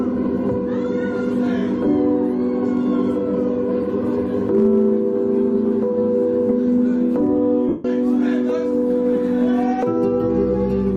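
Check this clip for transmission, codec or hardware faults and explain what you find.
One transmission fault is present: lost LE Audio frames from 7.69 to 7.85 s, a gap of about 158 ms, which fits roughly 21 lost 7.5 ms frames. The LC3 decoder concealed it by repeating the last spectrum with randomised signs and fading it, so the sound blurs into a noisy smear that decays toward silence.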